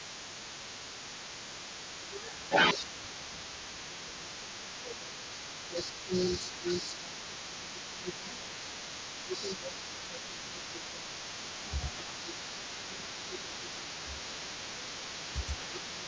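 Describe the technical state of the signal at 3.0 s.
Echo leak runs through the whole recording, including 3.0 s. A delayed copy of the speech trails the direct signal by 231 ms at roughly ten dB below it. The likely cause is a loudspeaker on one side whose echo canceller left part of the microphone pickup in place, so that residue travelled back down the line with the talker's audio.

Speech suppressed in double talk spans 1.48 to 5.15 s, so 3.0 s falls inside it. Here the speech dips in level, at its deepest by around 15 dB, and thins or drops out in pieces, about two seconds in total across the span. This is likely an echo canceller that, with both sides talking at once, could not tell the local talker from the loudspeaker echo and attenuated everything together. The band-limiting to 8 kHz from the call's microphone processing is also present throughout.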